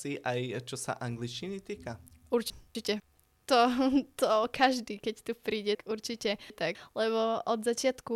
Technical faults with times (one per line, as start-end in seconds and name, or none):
2.50-3.00 chunks out of order
5.75-6.75 chunks out of order